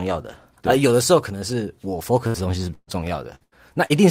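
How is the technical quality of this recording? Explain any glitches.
The recording has clear network damage in its second half. Packets were lost repeatedly between about 2.3 and 3.9 seconds, and the receiver patched each hole.

From 2.27 to 2.36, 2.74 to 2.89, 3.35 to 3.42 and 3.44 to 3.54 s there is a burst of packet loss: runs of packets never arrived in time. The decoder stretched the last sound to cover roughly 50 to 130 ms each time, fading it as it went, so the speech turns into a held buzz or dying hiss. Then it jumps ahead, with 60 to 140 ms of real speech gone. The 2.74 s gap also drops into silence for about 40 ms.

At 3.86 to 3.92 s a short concealed packet loss appears. About 40 ms failed to reach the decoder, and the receiver bridged it by extending the preceding sound and blending back into the real signal. The result is a brief smear or wobble rather than a gap, and a short consonant there may be swallowed.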